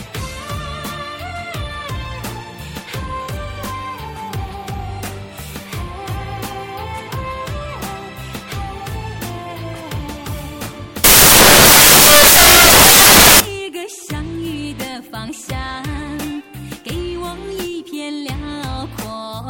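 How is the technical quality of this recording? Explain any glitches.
There is one glitch. From 11.04 to 13.40 s, samples built from the wrong bytes: misassembled bytes promote noisy low bits, turning the audio into loud, harsh broadband noise.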